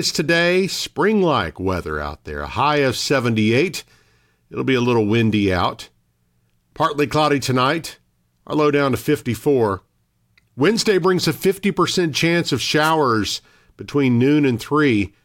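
At 12.83 to 12.91 s, just after "chance of", a wireless microphone noise hit: the FM radio link fades briefly and receiver hiss surges for about 80 ms as a swish of static. Unlike a digital dropout, the sound is buried in noise rather than cut to silence.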